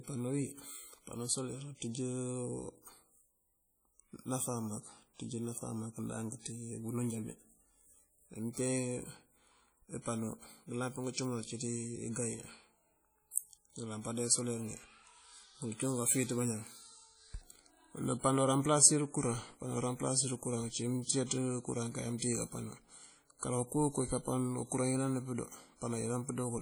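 Throughout the speech, heavy WMA compression at a low bitrate, likely around 32 kbps, leaves ringing, washy tones and a hiss that breathes with the signal. From 13.31 to 13.36 s, pre-echo smears quantisation noise about 49 ms ahead of a sharp attack, heard as brief hiss before a softened onset.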